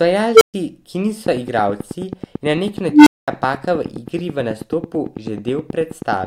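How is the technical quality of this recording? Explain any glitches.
The recording has clear technical problems: two short bursts from an unstable filter, and a click train running through most of the speech.

Unstable filter at 0.34–0.54 s and 2.91–3.28 s. A recursive filter's feedback ran away, so a tone near 400 Hz, then near 300 Hz, swells over 67 ms and 157 ms, clips, then drops to silence for 128 ms and 213 ms. Unlike acoustic feedback howl, each burst ends abruptly in dead silence.

Train of clicks from 1.26 s to 6.25 s: about fifty near-identical ticks at a steady 9.25 per second, peaking roughly 10 dB above the speech and audible in pauses too. The cause is likely electrical interference or a faulty connection or power supply. Their near-identical shape and regular rate set them apart from random crackle.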